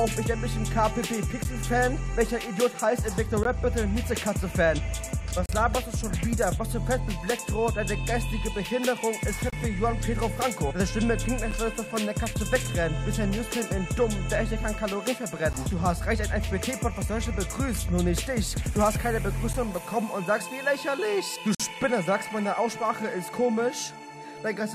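Gaps between stream segments interrupt the sound at 1.44 s, 3.43 to 3.45 s, 5.46 to 5.49 s, 9.50 to 9.53 s, 11.51 s, 15.53 s, 19.53 s, and 21.55 to 21.60 s. Each falls on a 2-second segment boundary, where the timestamps of consecutive segments fail to meet. The player fills each hole with silence, leaving abrupt, hard-edged dropouts of about 8 to 49 ms. Nothing is lost from the audio itself.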